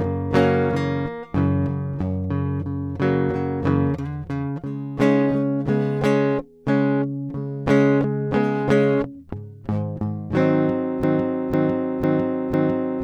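The playback or streaming chain most likely stalled at 11.04 s and kept re-sending the last half-second fragment it had buffered, a broken-record loop. From that point the music is replaced by one piece about 0.5 s long, repeated exactly and back to back four times, running on to the end of the clip. The rhythm stutters in a fixed cycle, and whatever music should have followed is lost.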